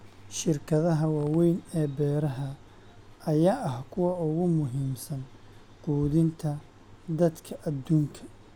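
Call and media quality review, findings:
No faults found.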